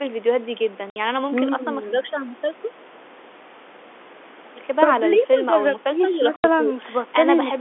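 At 0.9 s a 60 ms hole cuts the speech to dead silence with hard edges, and at 6.36 s an 80 ms one does the same. This is packet loss filled with silence: lengths fitting three and four 20 ms packets were replaced by nothing.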